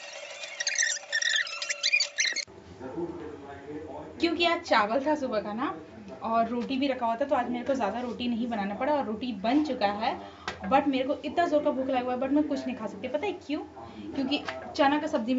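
Nothing technically wrong can be heard anywhere in this audio.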